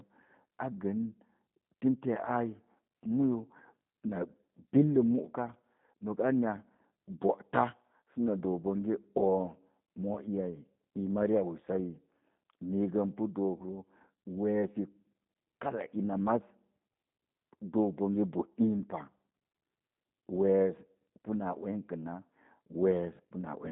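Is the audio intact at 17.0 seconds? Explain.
No. At 17.0 s, as throughout the clip, the speech carries G.729 codec damage. A parametric coder rebuilds it from a vocal tract filter, pitch predictor and sparse pulses, which fits an 8 kbit/s stream. The result is plainly rough and synthetic, confined to about 150 Hz to 3.7 kHz, with nothing above 3.8 kHz.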